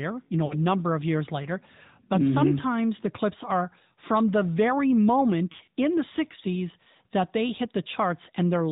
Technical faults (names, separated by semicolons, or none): AMR narrowband mobile codec; lost AMR speech frames